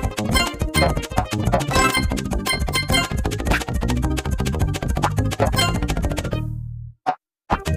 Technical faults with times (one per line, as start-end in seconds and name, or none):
none